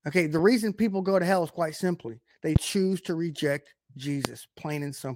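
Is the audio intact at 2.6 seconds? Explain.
No. A single loud pop sits from 2.56 to 2.58 s, between "is quite simply they" and "choose to reject", peaking about 20 dB above the speech, which continues underneath. A sudden voltage pulse, likely from a plug, switch, static discharge or driver glitch, was added to the signal, giving a sharp click-thump. On a waveform it shows as a tall narrow spike towering over the speech; on a spectrogram, a thin vertical stripe spanning all frequencies.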